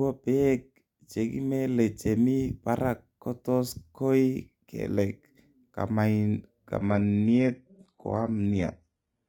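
At 6.77 s the speech switches abruptly to an adaptive stream at a lower bitrate and stays there until the end at 9.28 s. The connection apparently slowed and the player swapped versions without a gap. The treble turns thin, which fits a drop from 96 kbit/s AAC to 16 kbit/s HE-AAC. On a spectrogram, energy above 11.8 kHz vanishes at a sharp vertical edge, while the waveform continues unbroken.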